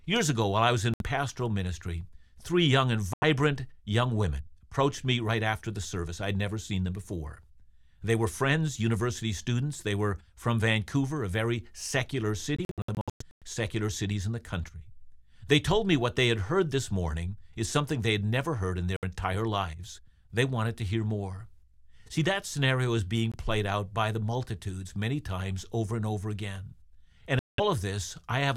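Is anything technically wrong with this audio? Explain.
Yes. Six Bluetooth dropouts cut holes in the speech, likely from packets arriving too late for the headphones. They fall at 0.94 s (64 ms, after "ago while I was"), 3.14 s (85 ms), 12.56–13.43 s (brief gaps totalling about 0.49 s, the longest about 107 ms, between "a very secular" and "secular cities in"), 18.96 s (64 ms), 23.32 s (21 ms, between "that scenario is being" and "played out by the") and 27.39 s (192 ms). Each gap sounds like a sudden mute, and the speech resumes as though it had kept running. A waveform shows flat silent stretches with sharp edges. A spectrogram shows blank vertical columns across all frequencies.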